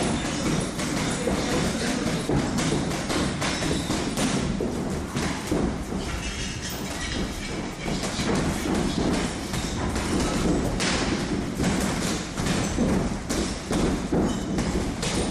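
No technical faults can be heard in this audio.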